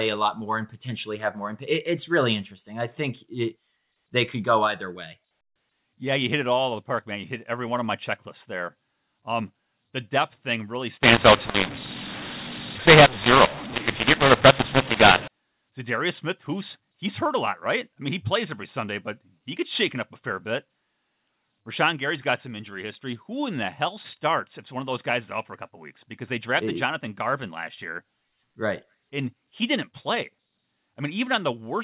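Telephone-band speech, cut off at 4 kHz in a way that fits 8 kHz G.711 coding. Right after "the depth thing really", from 11.03 to 15.28 s, there's a mu-law and A-law mix-up: A-law-coded samples get decoded as mu-law, so the levels come out scrambled, the speech turns harsh and gritty, and the pauses fill with hiss instead of going quiet.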